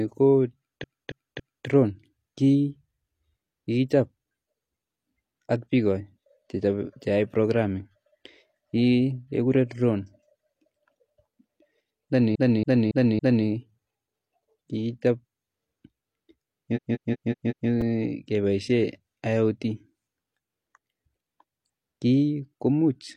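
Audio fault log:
0.79–1.63 s, 12.31–13.42 s, 16.72–17.65 s: repeated frames. A block of about 0.28 s, 0.28 s and 0.19 s respectively replays three, four and five extra times, giving a stutter.
17.81 s: chunks out of order. A roughly 5 ms chunk plays one position late, creating hard joins heard as a brief jumble.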